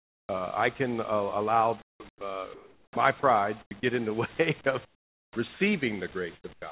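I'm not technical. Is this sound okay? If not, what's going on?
No. Comfort noise in place of the background at 0.00–0.29, 1.82–2.21, 2.54–2.96, 3.62–3.71, 4.85–5.36 and 6.35–6.62 s: the gaps become a flat, featureless hiss, likely because the sender paused transmission and the receiver filled in.

Onset clipped by the voice detector at 2.92–2.96 s and 5.34–5.36 s: the sound starts abruptly, its soft beginning missing, because the detector likely noticed the sound a moment late.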